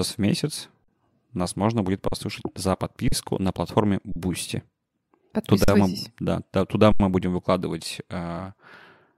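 The speech freezes six times: at 0.84 s after "в месяц", and at 2.08, 3.08, 4.12 and 5.64 s, each for 40 ms, then at 6.92 s for 80 ms. Each is an underrun with held sample. The buffer emptied and the output held its last value. No audio was skipped, so each resumes softly.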